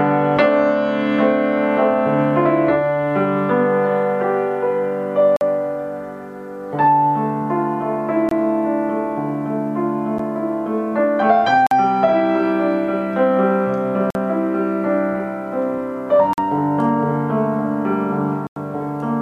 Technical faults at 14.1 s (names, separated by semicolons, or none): block of digital silence